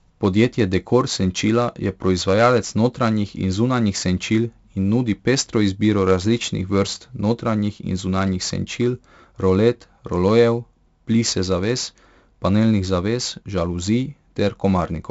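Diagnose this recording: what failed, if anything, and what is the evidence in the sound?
Codec stage: 4-bit ADPCM compression throughout. Gritty hiss tracks every loud syllable, and nothing sounds above 7.7 kHz. Coarse adaptive steps fit a 64 kbps stream.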